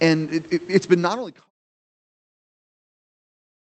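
No technical faults can be heard in this speech recording. The call path caps the top end near 8 kHz in a way that fits Opus at about 32 kbps, with faint room noise about 33 dB below the speech and a smooth editor's fade-out from around half a second to 1.51 s.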